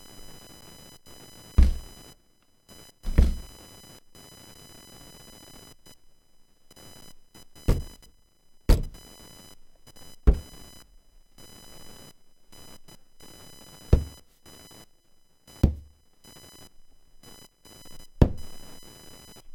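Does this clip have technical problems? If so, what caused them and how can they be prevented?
Yes. Computer activity noise runs through the whole clip. A thin buzz sits under the sounds, pulsing at around 1 kHz. It stays roughly 25 dB below the wanted audio. It follows the computer's workload, not the sounds themselves. Processor, graphics or mouse activity pushes current through the ground the audio circuit shares, and that leaks into the signal. To prevent it, use a USB audio interface with isolated or properly separated grounding.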